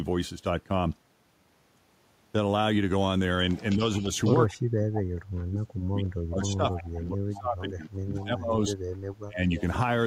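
Echo leak, 3.54 to 4.37 s: a faint copy of the speech trails it by about 208 ms, roughly 20 dB down, likely because a far-end loudspeaker's echo canceller let part of its microphone pickup through. Within that stretch, speech suppressed in double talk, 3.76 to 4.07 s, brings a brief, shallow dip of a few decibels, likely the canceller turning down the talker while both sides overlap.

From 4.48 to 8.66 s, speech suppressed in double talk returns far more heavily. For about four seconds the voice drops by as much as about 35 dB in pieces, likely because the canceller mistook it for echo. Inside that span the echo leak reappears at 6.71 to 6.96 s, again a 208 ms delayed copy about 20 dB below the speech, likely from the same incomplete cancellation. A final short suppression at 9.24 to 9.43 s removes about 0.2 s of speech with a deep dip near 35 dB, likely from the same double-talk misjudgement.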